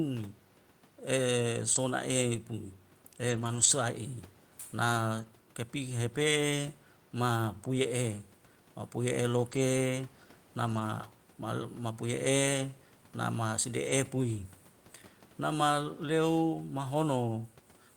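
Short concealed packet loss comes first, at 1.73 to 1.77 s. About 20 ms of the speech never arrived in time. The receiver bridged the hole by extending the preceding sound, its pitch if voiced or shaped noise if not, before crossfading back to real audio. The result is a brief smear or wobble in the speech, and a quick consonant there can drop out.

Lost packets rebuilt from error correction appear at 1.75 to 1.77 s (overlapping the concealment), 3.27 to 3.65 s, 5.17 to 5.23 s, 9.51 to 9.57 s, 10.67 to 10.81 s and 13.85 to 13.91 s. In each case the following packet carried a low-bitrate duplicate of the missing one, and the decoder played that instead. There is no gap, but those stretches sound rougher and noisier. The longest, near 3.3 s, totals about 200 ms of rebuilt audio, which fits roughly ten separate 20 ms packets lost across that span.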